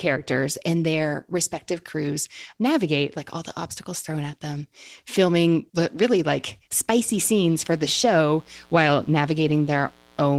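Mains buzz enters at 7.04 s and runs to the end at 10.38 s. Sharp switching spikes from the 60 Hz supply, twice per cycle, leak into the signal, spreading harmonics up to several kHz as a steady, raspy buzz sitting roughly 30 dB below the speech.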